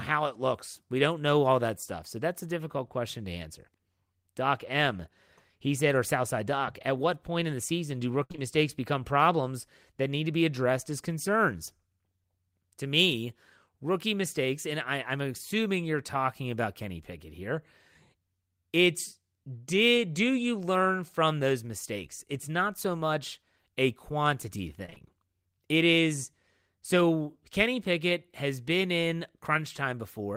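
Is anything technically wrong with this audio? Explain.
Yes. The speech has four packet-loss faults, three of them back to back.

Burst of packet loss, 8.23 to 8.32 s. About 60 ms of audio never arrived in time. The receiver bridged the hole with roughly 64 ms of synthesized continuation, extending the last sound and fading it down. The result is a brief held buzz or fading hiss where the real audio should be, and the speech jumps ahead when the stream resumes.

Short concealed packet loss, 8.32 to 8.36 s and 8.36 to 8.40 s, starting right after "in the season do" and ending just before "become problems that need". Each hole is about 20 ms, patched with about 19 ms of extrapolated signal, pitch-based if voiced and shaped noise if not, then crossfaded back into real audio. Coming straight after the burst, they extend the smear into a wobbly transition.

Repeated packet loss (robotic sound), 24.86 to 25.03 s, just after "so much a quantity". 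Four separate dropouts fall within about 170 ms. The longest is 26 ms, and roughly 80 ms of audio is lost. Concealment fills about half of that stretch, and each patch is followed almost immediately by another gap. This gives a choppy, robotic texture with fragments of speech missing.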